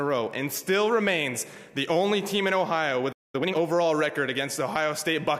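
At 3.12 s the sound just stops dead mid-flow and stays silent for about 214 ms, until 3.35 s. That's a playback stall. The gap has the feel of a player that ran dry, most likely because its buffer emptied or the playback thread got held up and couldn't feed the output in time. There's no fade or tail into the silence. The audio simply cuts out and then carries on.

Right after it comes back at 3.35 s, you get a stretch of time-compressed catch-up running to 3.55 s. For those 200 ms the audio plays at double speed while keeping its normal pitch. That's the player shrinking its backlog by dropping small slices and cross-fading across the joins, so it sounds rushed before it settles back to normal pace.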